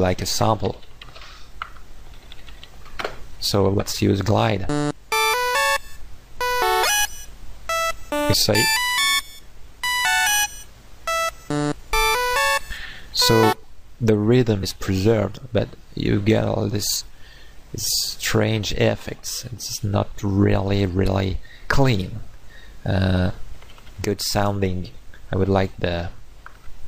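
At 10.41 to 10.48 s and again at 16.95 to 17.02 s, damaged data in the compressed stream makes the decoder misread frames and lose sync, producing a brief glitch of about 70 ms and 62 ms respectively.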